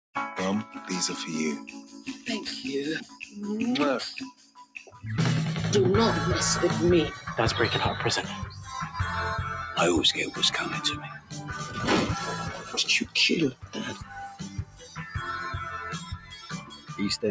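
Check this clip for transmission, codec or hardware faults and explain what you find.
One fault runs through the whole clip, and a second kind recurs at seven points. The call's microphone processing passes the sound as expected, with nothing above 8 kHz.

The noise suppressor applied to music or sounds is active from start to finish. Designed for speech, it mistakes sustained tones, ambience and decaying tails for noise and turns them down. The level therefore swings by roughly 15 dB, and held material sinks beneath the attacks, giving a pumping, thinned character.

Sound cut by the noise suppressor occurs at 1.77–2.26, 3.05–3.36, 4.31–5.02, 11.02–11.78, 12.41–12.75, 13.51–15.16 and 15.65–16.96 s. In each stretch the suppressor classed the audio as noise and pulled it down harder, by about 7 to 16 dB, so steady passages dip and decays end early.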